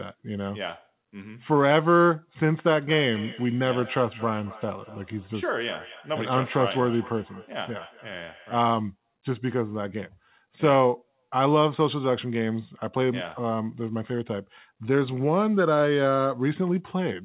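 Speech carried over a narrowband call path with nothing above 4 kHz, which fits G.711 mu-law. From 2.37 to 8.61 s there is feedback echo between two devices: one device replays the other's microphone signal, which is picked up again, so the speech returns roughly every 200 ms, peaking at about 19 dB below the direct voice.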